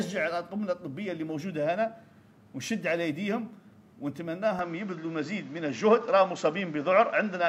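At 4.59 s the sound abruptly narrows, with nothing above 7.6 kHz, a level shift of about 5 dB and a new background noise roughly 30 dB down, with no gap at the switch. That combination, not a bare filter, points to an input likely switched to a poorer device.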